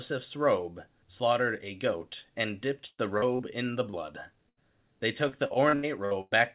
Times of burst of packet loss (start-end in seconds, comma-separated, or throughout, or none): 2.86-3.00, 4.49-4.59